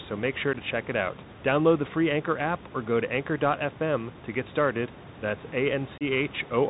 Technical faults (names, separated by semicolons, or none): Bluetooth CVSD headset codec; unconcealed Bluetooth headset packet loss